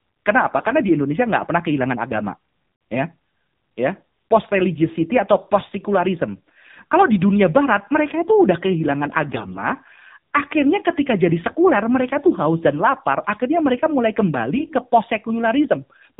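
Throughout, the speech carries AMR narrowband mobile codec damage. Nothing above 4 kHz survives, and the buzzy, synthetic tone fits a low rate near 7.4 kbps. AMR bit errors strike at 0.56–0.73 s, 9.28–9.60 s and 14.56–14.73 s. Flipped bits misplace the excitation pulses, so the voice turns briefly hoarse, scratchy and gargly, while pitch and level hold.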